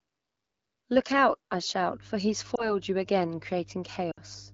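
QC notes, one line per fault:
1.85 s to end: mains hum. A steady low tone at 50 Hz enters at 1.85 s and continues through to the close of the clip, sitting about 25 dB below the speech. The constant pitch at the mains frequency points to power-line coupling, such as a ground loop or a nearby transformer, rather than acoustic noise picked up in the room.
2.56 to 2.75 s and 4.12 to 4.21 s: lost AMR speech frames. Both events sound like a decoder covering missing data by repeating its last good pitch and vocal tract settings at falling gain. The first matches a single lost 20 ms frame: a brief dip or warble whose effect spreads to about 2.75 s. The second matches three consecutive frames, about 60 ms, so the sound drops to near silence within two frames before the voice comes back weak or rough for a moment. The clip's clear wideband speech fits an AMR-WB mode at 12.65 kbit/s or above.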